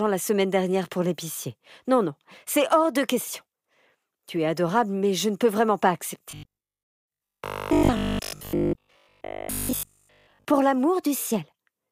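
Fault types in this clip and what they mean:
Robotic sound from repeated short buffers: from 6.31 to 10.45 s the speech becomes a rigid, metallic buzz at 50 Hz, a repeat every 20 ms, which follows the original only roughly. The likely cause is new audio arriving too seldom, so a short stretch is replayed in place of the real signal for most of that span. Unlike a dropout there is no gap, and unlike a pitch shift the buzz stays at one fixed rate.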